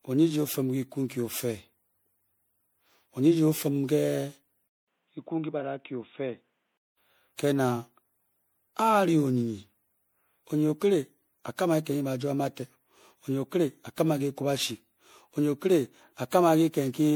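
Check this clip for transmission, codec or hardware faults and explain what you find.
Two faults are present: a codec degradation that runs through the whole speech clip, and a brief stretch where the sound drops to a much narrower band.

Generation loss affects the full clip. The speech sounds swirly, hollow and smeared, with softened consonant attacks, more than a single MP3 at 96 kbit/s would produce. That points to repeated MP3 encoding, likely around seven passes. Each pass quantises on a shifted frame grid, so the errors accumulate. On a spectrogram the upper bands look patchy, with flickering holes and blurred onsets, and nothing appears above 20.9 kHz.

An input switch to a poorer device occurs from 4.68 s to 6.97 s. At the switch there is a 200 ms silence. After it the speech becomes dull and boxy and about 5 dB quieter, with a new noise floor roughly 45 dB below the signal. Those changes fit a likely change to a lower-grade microphone or a headset call profile. 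On a spectrogram the energy stops at a hard ceiling of 3.8 kHz for that span. The waveform shows the gap and then a lower envelope.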